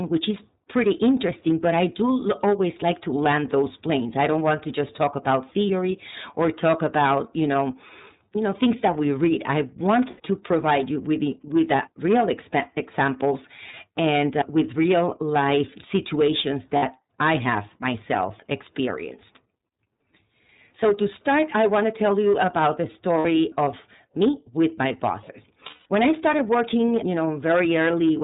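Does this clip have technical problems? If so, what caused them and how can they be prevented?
Yes. There's hard clipping all the way through: the level is pushed about 9 dB past what the chain can pass, so the loudest peaks (a few percent of the samples) get sliced flat, giving a harsh fuzzy edge on every loud syllable. Keep gain lower before conversion so the peaks stay under full scale.

The iLBC codec is on the whole clip, and its damage is plainly audible. Nothing above 4 kHz gets through, and the speech sounds rough and a bit synthetic, which fits iLBC's 30 ms frame mode at around 13.33 kbps. Use a wideband codec if the link can afford it.

Lost iLBC frames show up at 10.1 s (about 90 ms), 13.71 s (30 ms), 16.77 s (60 ms), 23.19 s (60 ms) and 25.68 s (180 ms). In each gap the decoder repeats the last pitch cycle with noise, so you hear a held buzzy vowel, and the longest one fades out. 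Because each frame decodes on its own, the voice snaps back right after. A cleaner network path or a bit of redundancy or FEC would cut these down.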